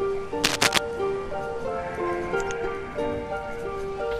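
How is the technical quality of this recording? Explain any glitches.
The recording has one clear glitch, near the start. From 0.44 to 0.78 s there is cable scratch noise: a worn cable, connector or control was likely moved, so its contact resistance jumped about rapidly. That lays dense, irregular bursts of crackly rustling over the sound, slightly louder than the sound itself.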